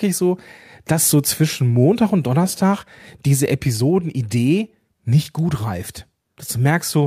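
No technical faults are audible.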